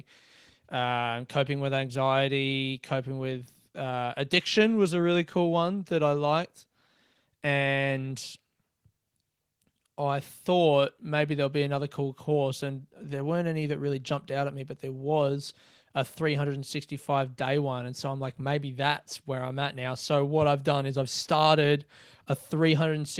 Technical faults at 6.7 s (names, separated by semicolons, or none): none